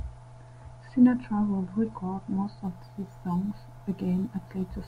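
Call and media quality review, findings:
Imaging from sample-and-hold upsampling, 2.64 s to end, after "would record most": metallic fizz, images 11–22 kHz, about 34 dB down. Resampler repeating samples unfiltered, which fits a 22 kHz to 48 kHz conversion.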